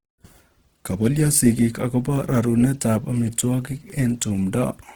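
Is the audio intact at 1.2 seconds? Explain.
No. At 1.2 seconds, as through the whole clip, the speech carries plainly audible Opus compression damage, likely from its music (CELT) mode at a rate around 16 kbps. The encoder holds each band's energy but, short of bits, fills detail with folded or noise content, so the sound turns grainy and rough rather than swirling. Unlike MP3 artefacts, there are few spectral holes, and the band stays wide, reaching about 20.4 kHz.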